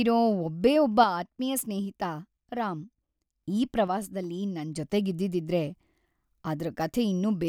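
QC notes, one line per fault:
1.04–3.44 s and 3.88–4.76 s: one channel drops out. The speech level falls abruptly by about 6 dB at each start and returns at each end, the step you get when one stereo side likely goes silent and the mono sum keeps only half the shared signal.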